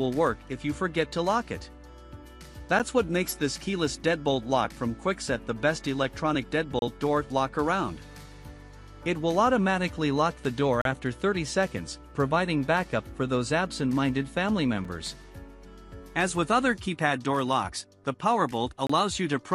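The audio drops out five times in brief holes of silence with hard edges. They fall at 2.79 s, 6.79 to 6.82 s, 10.82 to 10.85 s, 14.85 s and 18.87 to 18.90 s, lasting between about 5 and 37 ms. The spacing of roughly 4 s matches the segment length, marking a gap between stream segments. Each segment's timestamps leave a small space before the next, and the player fills it with silence. Nothing is lost. The gap only adds time.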